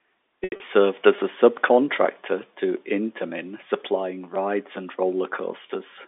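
From 0.44 to 0.60 s a held, buzzy tone briefly stretches the sound: packet loss with pitch repetition, about 120 ms of audio lost across 160 ms, concealed by repeating the last pitch period.

Brief buzzy stutters follow at 1.16 to 1.18 s, just before "a subcontractor to", at 2.77 s, just after "a subcontractor to", and at 4.34 s. Each is a repeated buffer: a 5 ms chunk replayed with hard joins, which fits a tiny playback buffer starving.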